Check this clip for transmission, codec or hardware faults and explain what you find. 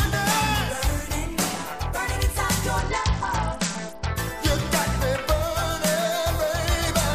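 One transmission fault appears: a Bluetooth SBC bit pool drop from 2.78 to 4.16 s. The link apparently congested, so the encoder cut the bits per frame, which fits a bit pool falling from 31 to 9, near 72 kbps. Upper sub-bands starve and the rest quantise coarsely, so treble dulls and gritty noise rises until recovery. On a spectrogram the top band goes dark, with speckled noise below; the waveform barely changes.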